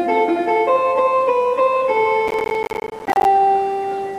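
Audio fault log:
2.28–3.25 s: processor overload crackle. For just under a second, a dense run of short dropouts tears through the sound, heard as gritty crackle that stops abruptly at 3.25 s. The processor is missing its deadline to fill each small audio buffer, and dozens of deadlines are missed again and again over the stretch. Each miss leaves a brief hole of silence with hard edges. The length of each gap fits buffers of around 10 ms, and the clicks at their edges merge into the continuous tearing texture.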